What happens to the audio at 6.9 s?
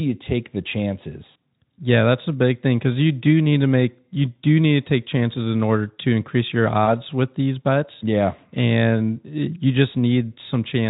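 Right around there, from 6.85 to 6.93 s, there's a short stretch of VoIP packet loss concealed by the speech codec. The gap sounds like a single 20 ms frame went missing, and the decoder papered over it by extending the last pitch and filter shape at dropping gain. You hear a brief buzzy or noisy, smeared blip, and the voice stays a bit thin for a few tens of milliseconds after the audio resumes, since the Speex decoder needs a moment to recover.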